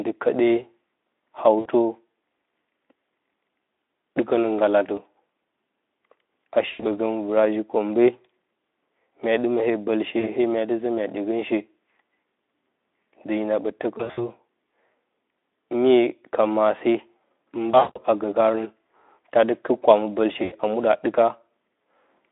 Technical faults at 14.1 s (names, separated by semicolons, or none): VoIP packet loss concealed by the speech codec